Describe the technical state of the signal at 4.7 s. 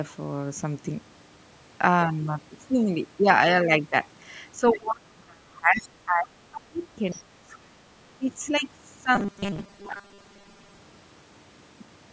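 At 4.7 s the talker's speech is being pulled down hard: between 4.57 and 7.73 s the level dips, reaching around 30 dB below normal at its deepest and hollowing out roughly three seconds of that stretch. This is speech suppressed in double talk, likely caused by an echo canceller facing both parties speaking at once. Unable to separate the near talker from loudspeaker echo, it attenuates the whole microphone signal, so the wanted speech drops along with the echo.

Inside that dip, from 4.68 to 4.80 s, a brief fragment of a second voice comes through, sitting around 15 dB below the talker's level. This is the other side's voice leaking through, likely the far end's audio played on the talker's loudspeaker and picked up by the microphone, with the echo canceller failing to subtract all of it. At only about 120 ms it is a short scrap, overlapping the onset of the suppression.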